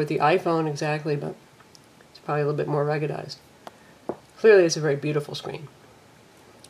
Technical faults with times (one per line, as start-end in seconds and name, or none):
none